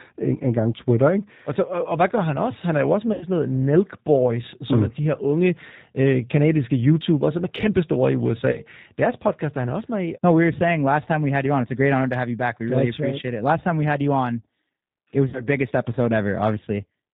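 Throughout the speech, the G.729 codec is plainly audible: everything above 4 kHz is missing, and the voice has a slightly rough, synthetic texture. The codec does not transmit the waveform itself. At 8 kbit/s it sends a vocal tract filter, a pitch predictor and a sparse set of pulses for each 10 ms frame. The decoder rebuilds the sound from those parameters, so fine detail between the pulses is lost.

VoIP packet loss concealed by the speech codec occurs three times. Each time the decoder fills the gap by extending its last pitch and filter settings while turning the gain down. At 3.13 s, just after "er jo også", about 80 ms of audio is lost, which fits four 20 ms packets. The speech is stretched into a buzzy tone or coloured noise that fades until 3.24 s. At 8.52 s, after "som er kæmpestore i", a 20 ms loss fits a single packet. The effect still runs to 8.62 s because each frame is predicted from the one before. 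From 15.29 to 15.44 s, a 40 ms loss leaves the voice weak and smeared for a while after the sound returns.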